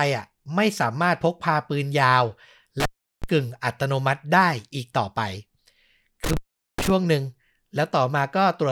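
Speech clip with an intermittent contact fault. The sound drops out twice, from 2.80 to 3.24 s and from 6.24 to 6.91 s, with crackle at each edge. The gaps last about 0.36 s and 0.42 s, leaving faint hiss. A loose cable or plug is briefly breaking the signal path.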